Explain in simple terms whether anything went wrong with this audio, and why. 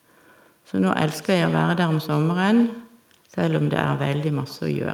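Something did go wrong: the whole clip has echo with no canceller. Every bit of speech gets a faint, thin copy trailing about a tenth of a second behind it, from the first moment to the last. That happens when the far end plays the call through a loudspeaker, their microphone picks it back up, and nothing strips it out, so your own voice returns after the trip across the network.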